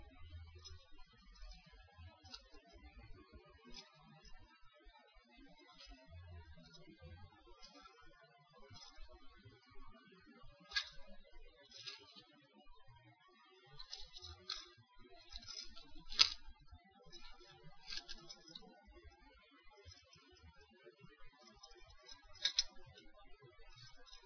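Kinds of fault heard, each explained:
No technical fault can be heard anywhere in the sound.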